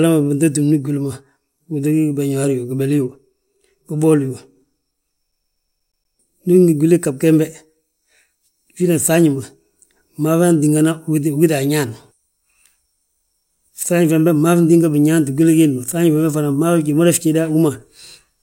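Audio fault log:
5.32 to 6.16 s: CD stuck on one turn. A single 120 ms slice of the speech plays seven times in a row, each pass cut off by a brief mute before it restarts, giving a rapid, perfectly regular stutter. A scratch on the disc knocks the laser back one track at the same point of every rotation, so it keeps rereading the same short stretch instead of moving on, until it finally breaks free.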